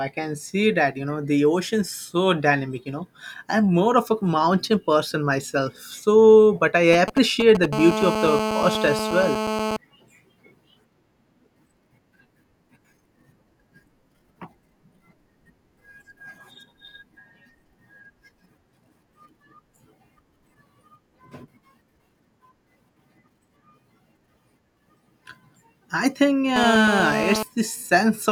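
GSM signalling bursts run from 6.93 to 7.66 s. A 2G phone close to the recording chain is exchanging short control transmissions with its network, and some stage of the audio circuitry rectifies those radio pulses into the signal. The result is a galloping dit-dit-dit of short 217 Hz buzzes, sitting only a little below the speech level and having nothing to do with the talker.

GSM phone buzz follows immediately, from 7.73 to 9.77 s, and returns from 26.56 to 27.43 s. Here the phone is in a call and transmits its time-slot bursts continuously at 217 per second. The circuitry demodulates that pulse train into a hard, raspy 217 Hz tone rich in harmonics. It holds steady through both stretches at about 5 dB below the speech and is entirely unrelated to what is being said.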